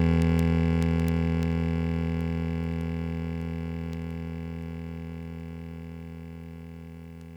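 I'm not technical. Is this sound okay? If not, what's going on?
No. Word clock ticks run through the music from 0.13 to 7.3 s, about ten per second. Two digital devices are each keeping their own time and drift slightly apart, so roughly every tenth of a second a single sample slips, causing a sharp tick.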